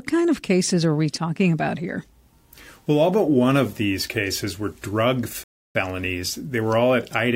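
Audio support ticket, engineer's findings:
Rebuffering stall at 5.44–5.75 s in the speech. Sound drops to silence, then picks up exactly where it stopped. No content lost, about 316 ms added. Probable component: player buffer. Downloaded audio ran out; playback paused until more data arrived.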